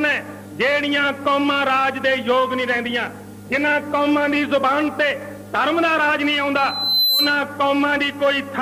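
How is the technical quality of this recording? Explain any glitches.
The recording has one clear defect: a loudspeaker feedback squeal from 6.55 to 7.40 s. A pure 4 kHz tone swells over roughly half a second until it sits about 5 dB above the programme audio. A microphone is re-amplifying its own loudspeaker output, and at that frequency the loop gain exceeds unity, so the tone reinforces itself each pass until it cuts off at 7.40 s.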